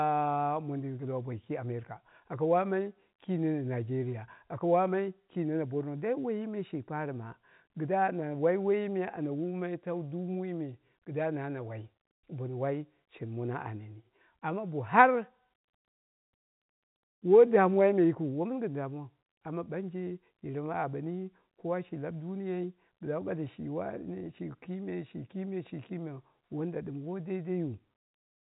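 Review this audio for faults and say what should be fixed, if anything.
No faults; nothing needs fixing.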